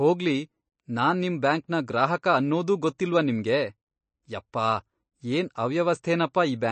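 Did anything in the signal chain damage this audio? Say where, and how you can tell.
Yes. Throughout, the audio is plainly watery with nothing above 8.3 kHz, so a spectrogram shows a flat ceiling there. This is likely MP3 compression at a bitrate around 32 kbps.

Pre-echo at 2.98 s, just after "ನಿಮ್ ಬ್ಯಾಂಕ್ನ ಗ್ರಾಹಕ ಅನ್ನೋದೂ": the codec spread block noise about 13 ms ahead of an attack, visible as a hiss smear before the waveform's onset.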